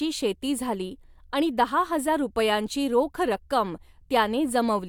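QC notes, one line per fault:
No faults heard in this speech clip.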